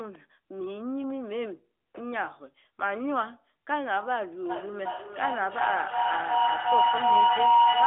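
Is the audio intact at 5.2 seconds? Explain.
No. From 4.49 s to 7.87 s, a feedback howl from a microphone-to-loudspeaker loop builds into a tone around 1 kHz, with a loop delay of roughly 0.4 s, peaking about 8 dB above the speech.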